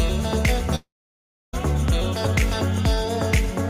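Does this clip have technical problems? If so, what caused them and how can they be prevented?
Yes. From 0.75 to 1.55 s there is a long network dropout, likely from packets lost in transit. About 0.78 s of audio is missing: a fading buzz or hiss briefly continues the last sound, then roughly 0.66 s of silence follows, and playback resumes further on. Unlike a simple mute, the gap ends with the lost material skipped rather than delayed. A steadier connection, a larger jitter buffer and forward error correction would prevent it.

At 2.78 to 2.80 s a single loud pop, peaking about 5 dB above the signal, sits on top of the audio while the sound continues underneath. It is not a gap or a clip. It likely comes from a voltage spike from a plug, switch or static discharge. Connecting and switching gear only while muted, plus good grounding, prevents it.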